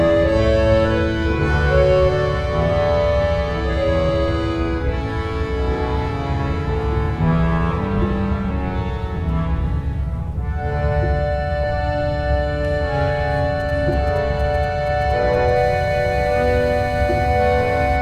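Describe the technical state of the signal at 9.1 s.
At 9.1 s the signal is intact, with no dropout, clipping, distortion or other fault to be heard.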